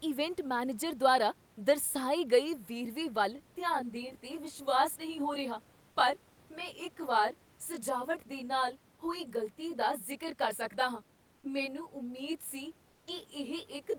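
Speech, with room noise sitting about 32 dB below the talker, and from 3.36 s to the end of the clip it sounds rough or slightly doubled because of channel delay (comb filtering). One channel arrives roughly 20 ms behind the other, and when the two are folded to mono the shared content cancels at a ladder of evenly spaced frequencies starting down around 20 Hz. On a spectrogram this shows as many fine, fixed horizontal notch lines running through everything after 3.36 s, while the waveform keeps its overall shape but looks slightly smeared. Between 12.89 and 13.07 s, a 180 ms gap, the real room background drops out and is replaced by comfort noise in place of the background. That is a steady, detail-free hiss about 3 dB quieter than the true ambience, most likely from Opus DTX, where the sender stops transmitting during a pause and the receiver synthesises noise shaped roughly like the room. 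On a spectrogram that stretch looks like a smooth, uniform wash without the texture around it, and the waveform shows a brief flat, slightly lower noise floor.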